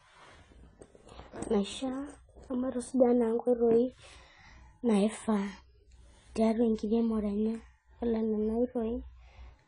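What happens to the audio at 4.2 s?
Likely AAC compression at a starved bitrate, around 24 kbps, runs throughout, so at 4.2 s the speech is dull and smeared, with nothing above 10 kHz and plainly audible warbling.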